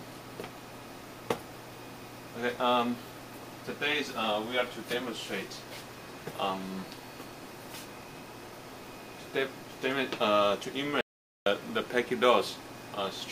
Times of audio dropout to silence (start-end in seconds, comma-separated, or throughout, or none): 11.01-11.46